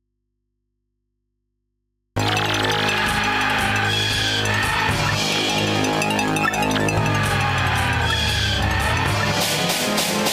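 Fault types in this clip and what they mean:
Audio dropout to a faint residue: until 2.17 s only faint hum remains, likely a signal break leaving the input open; near-flat waveform, thin low hum lines on the spectrogram, then abrupt return.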